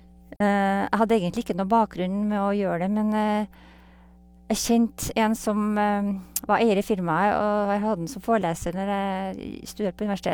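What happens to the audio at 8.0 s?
At 8.0 s you're hearing the same mains hum that runs under the whole speech clip: a steady 60 Hz tone with some low harmonics, roughly 25 dB below the speech. A ground loop or a nearby transformer is leaking the power line into the signal path.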